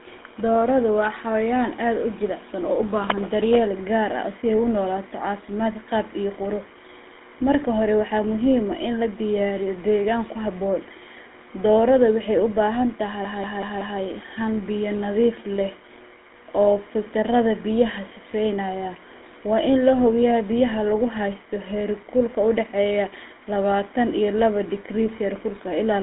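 Speech, passed through a GSM full-rate codec for its whole length. The line band runs from about 250 Hz to 3.6 kHz, nothing survives above 3.8 kHz, and the pulse-driven vocal-tract model leaves a plainly audible buzzy, gravelly roughness, which fits 13 kbps GSM full rate.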